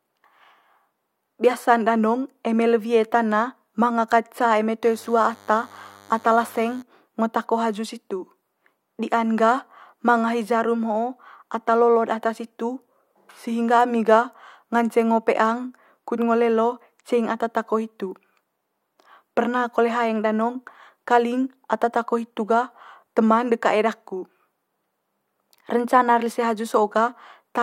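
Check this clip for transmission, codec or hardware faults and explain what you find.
There's one fault here, a DECT cordless phone buzz from 4.82 to 6.82 s. For those two seconds a thin, steady buzz sits well under the speech, roughly 30 dB down. What's happening is a DECT handset or base close to the gear firing its short radio bursts 100 times a second. The audio circuitry rectifies them, so you get a 100 Hz buzz packed with harmonics, which gives it that raspy, edgy quality.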